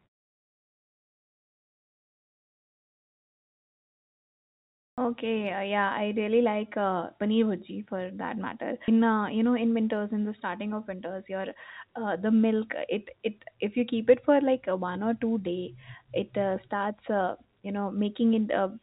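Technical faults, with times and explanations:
4.90 s: clipped start after a pause. Speech resumes after nearly 5 s of silence with its first 78 ms missing. The output device had gone idle and took that long to wake. So the opening sounds are swallowed and the word starts abruptly.
8.88 s: skip ahead. Playback jumps forward with no gap. Roughly 0.7 s of speech is gone, and the two sides are joined almost directly. Later audio was already queued, so the missing stretch was dropped to catch up.
9.43 to 9.85 s and 10.85 to 12.08 s: jitter buffer speed-up. The buffer held more audio than it wanted. The receiver cut many short pitch-period pieces, about 50 ms and then about 100 ms in all. Speech runs 11% and then 8% faster at unchanged pitch, sounding hurried.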